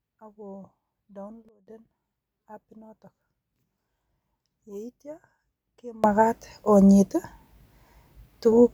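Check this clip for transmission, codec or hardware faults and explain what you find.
Two sudden gain jumps affect this speech. At 1.49 s the level drops by about 19 dB, then returns at 1.67 s. At 6.04 s it rises by about 24 dB and stays raised to the end. Voice and background noise shift together, instantly. The likely cause is a gain step applied without a ramp.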